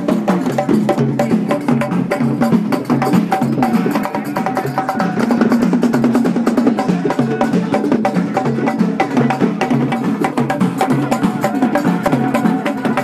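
Compressed frames skipped at 10.32 s and 12.07 s: whole frames of about 26 ms never reached playback, so the audio jumps ahead by roughly 50 ms, then 30 ms.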